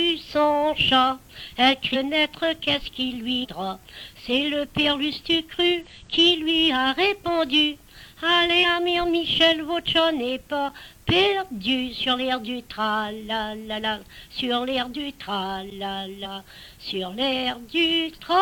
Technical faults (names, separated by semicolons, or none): damaged data in a compressed stream